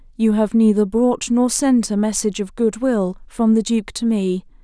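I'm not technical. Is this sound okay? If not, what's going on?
Yes, this sound is okay, and there's nothing going on with it that needs fixing.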